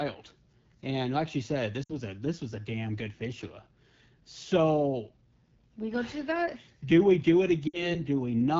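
Throughout the speech, the AMR wideband (HD Voice) codec damage is plainly audible. The voice has a rough, raspy grain, and the top band sounds like hiss rather than real detail, because only content up to 6.4 kHz is actually modelled and the 6.4 to 7 kHz range is filled with shaped noise. This level of degradation fits one of the lowest AMR-WB modes, around 8.85 kbit/s.

At 1.83 to 1.94 s, just after "like she said" and before "a this was a", lost AMR speech frames cause a brief dropout about 60 ms long. The decoder repeats the last good pitch and vocal tract parameters at falling gain, so the sound drops to near silence within two frames, which fits about three missing 20 ms frames. The same fault returns at 7.67 to 7.96 s, right after "we do it". There the concealed sound drops to near silence before the signal resumes.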